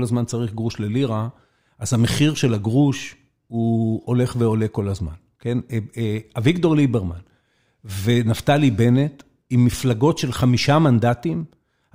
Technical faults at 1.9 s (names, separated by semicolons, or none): none